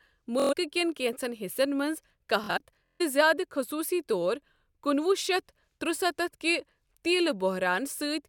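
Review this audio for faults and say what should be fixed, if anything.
Two Bluetooth stutters break up the speech. The first runs from 0.40 to 0.53 s, just before "كین كینژن حِصن منز", and drops about 116 ms. The second spans 2.44 to 3.02 s, just after "كین كینژن حِصن منز". About 348 ms goes missing in gaps spread over 557 ms, and the longest is 139 ms. Packets arrived late or not at all. The receiver kept replaying its last short slice, which gives a buzzing, machine-gun repeat. Then the speech jumps ahead as though it had kept playing. To fix it, record over a wired link or a stronger, less congested wireless connection.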